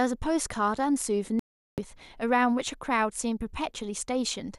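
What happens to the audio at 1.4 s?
At 1.39 s the speech drops to silence in a digital broadcast dropout and stays silent until 1.78 s, a hole of about 0.38 s that fits a run of around sixteen lost frames. The receiver stopped getting decodable frames, either through signal loss or failed checksums, and muted its output rather than play corrupted data. Audio resumes mid-programme when valid frames return, and whatever was transmitted during the gap is lost.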